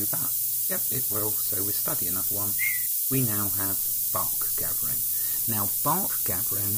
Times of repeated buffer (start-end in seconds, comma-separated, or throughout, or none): none